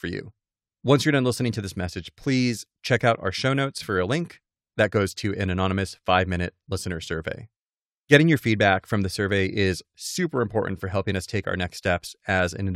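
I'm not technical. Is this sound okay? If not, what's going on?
Yes, it sounds fine.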